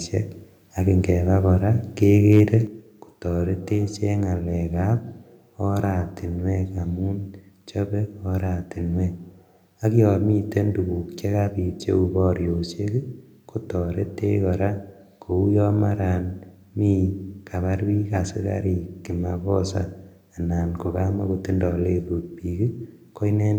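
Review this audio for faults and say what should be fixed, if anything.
Right after "ak ingebaa koraa", from 2.31 to 2.54 s, the loudest peaks flatten and take on a harsh, crackly edge. That's microphone overload: the signal runs about 2 dB past the converter's ceiling, so the tops of the waveform get sliced off, and a small share of the samples in that stretch sit pinned at the converter's limit. The cause is likely an input level set too hot for this talker. To prevent it, lower the mic gain a bit so the loudest moments keep some headroom.

Then at 2.67 s there's a sudden drop of about 5 dB that hits the voice and the room sound together, which is the microphone volume stepped down. Coming right after that distorted burst, it most likely means the call software heard the clipping and cut the device's input level in one step to stop it happening again. Both voice and background shift at once because the change is upstream of everything. 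Setting a sensible level before the call, or turning off automatic mic adjustment, keeps that jump from happening.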